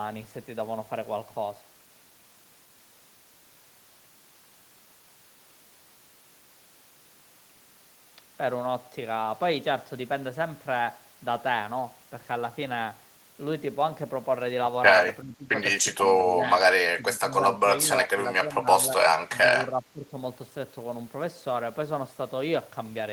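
Speech, and from 15.22 s the talker keeps ducking out: 15.22–15.57, 15.93–16.64, 16.95–17.68, 17.84–18.92, 19.29–19.4 and 19.63–20.12 s, dropping about 10 to 15 dB. That's speech suppressed in double talk, likely an echo canceller mistaking the talker for echo.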